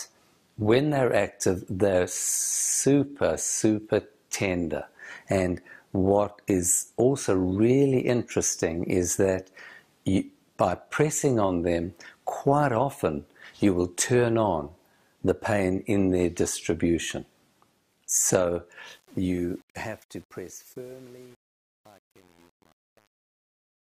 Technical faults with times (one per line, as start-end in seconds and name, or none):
18.88-23.87 truncation distortion on a fade